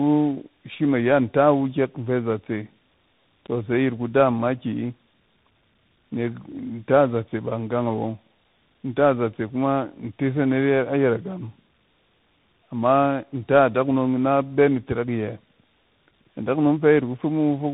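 Speech that sounds rough, muffled and warbly from start to finish, with nothing above about 3.8 kHz. This is tandem speech coding: the audio suggests an AMR-style mobile codec followed by two CVSD stages, each coder re-encoding the previous one's degraded output.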